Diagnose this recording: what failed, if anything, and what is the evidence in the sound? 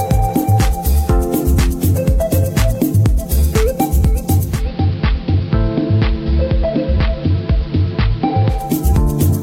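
Digital radio blending to analogue, 4.42 to 8.74 s: the receiver cross-fades over 252 ms to AM, adding hiss about 25 dB below the signal and dropping about 1 dB.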